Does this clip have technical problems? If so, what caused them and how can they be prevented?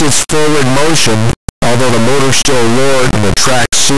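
Yes. Across the whole speech clip, an integer read as float fault turns the signal into a brutally loud, buzzing square wave that snaps to silence in quiet gaps. The 32-bit integer samples were interpreted as 32-bit float, so their bit patterns became near-zero or enormous values. Unlike ordinary overload clipping, the output jumps between silence and the clipping limit instead of only flattening the loudest peaks. Prevent it by declaring and checking the sample format at every file and buffer handoff.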